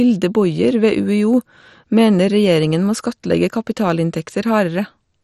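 Throughout, the speech carries heavy MP2 compression damage: dull, gurgling and granular, with nothing above 14.5 kHz, likely from a low bitrate around 56 kbps starving the upper sub-bands.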